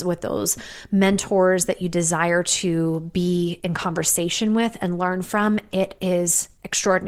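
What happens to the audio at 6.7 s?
At 6.7 s the adaptive stream is still playing at a lower bitrate: the connection slowed, and from 3.45 s, right after "that you desire to", to the end, the speech carries more codec artefacts, consistent with a switch from roughly 64 to 16 kbit/s Opus.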